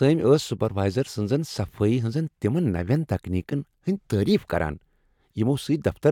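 Nothing in the speech here points to a technical fault, so there's no moment worth flagging anywhere along the way.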